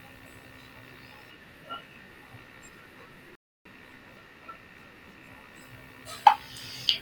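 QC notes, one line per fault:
3.35–3.65 s, rebuffering stall: the speech drops to silence for about 300 ms, then picks up exactly where it broke off. No audio is skipped. Playback ran dry and waited for more data to download, so the pause only adds time.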